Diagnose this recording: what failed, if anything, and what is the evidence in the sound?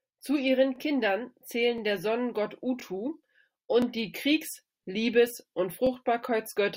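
Overlapping chunks at the buffer stage: short stutters at 0.76, 1.78, 3.82 and 5.87 s, where each 1.0 s chunk replays about 21 ms of the previous chunk's tail.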